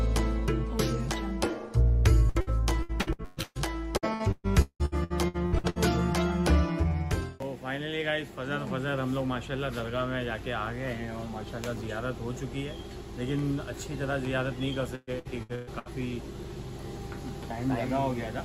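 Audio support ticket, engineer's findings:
Repeated packet loss (robotic sound) at 2.29–3.58 s, 3.97–5.79 s and 14.95–15.88 s. The audio is choppy with pieces missing. Network path is dropping or delaying packets. Concealment extends the last sound over holes of up to 0.18 s, covering roughly 40% of each stretch.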